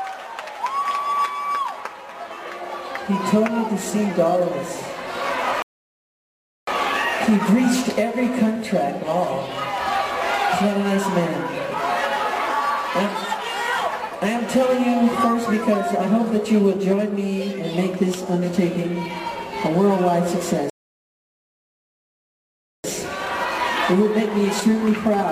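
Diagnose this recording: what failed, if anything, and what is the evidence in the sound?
The failure is at the playback stage, a rebuffering stall occurring twice. The audio drops to silence from 5.62 to 6.67 s, adding about 1.05 s, and again from 20.70 to 22.84 s, adding about 2.14 s. Each time it picks up exactly where it stopped, with nothing skipped. The player exhausted its downloaded buffer, halted output until enough data arrived, then resumed, so the gaps add time without losing audio.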